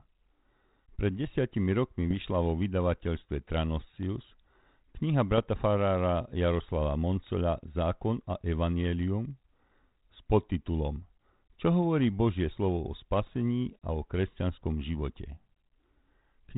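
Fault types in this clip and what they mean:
Bit errors on an ADPCM link: Flipped bits upset the decoder's step size and predictor, so each hit rings on briefly. Short pops and rough bursts sound at 2.11, 5.38, 7.27 and 13.26 s. The last, just after "slovo o", has the most errors.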